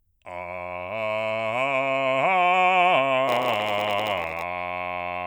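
From 3.27 s to 4.44 s the music picks up a steady buzz at about 93.8 Hz and drags slightly, playing at 0.938 times its normal speed while keeping roughly its usual pitch. This is a block size mismatch (padded). One stage hands over shorter blocks than the next one reads, which fits a 512-sample read block. The shortfall in each block is filled with silence, so a tiny gap recurs at the block rate.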